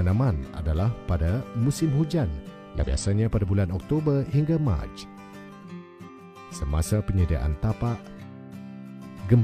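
Damaged data in a compressed stream breaks the audio twice: at 2.79 to 2.84 s and again at 6.04 to 6.10 s, bytes in the encoded stream arrive corrupted, so the decoder misreads those frames, loses its place, and has to hunt for the next valid frame header before it can resume. Each time this produces a brief chirp or blip of roughly 50 to 60 ms in place of the intended sound, after which normal playback picks up again.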